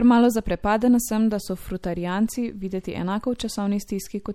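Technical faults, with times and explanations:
Throughout, MP3 compression: watery, swirly speech with nothing above 17.7 kHz, likely from a lowish-bitrate encode, around 64 kbps, that keeps dropping weak frequency lines.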